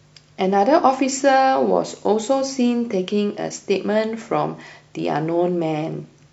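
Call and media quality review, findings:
Nothing to flag on this speech clip: no faults turned up anywhere in the recording, so there's nothing to chase on this ticket.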